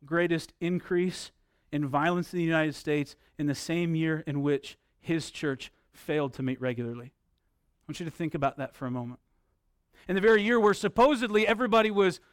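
A recording of speech, with no technical fault to point to anywhere in it. Nothing in the signal chain calls for comment at any point.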